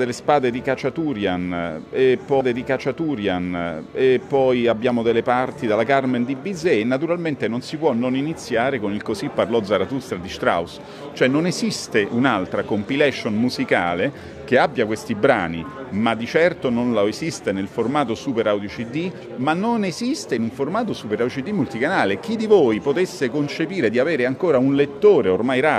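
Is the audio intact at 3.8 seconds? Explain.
No. From 2.39 to 4.41 s a stream segment is repeated: the player queued the same segment twice, so about 2.0 s replays after a small blip.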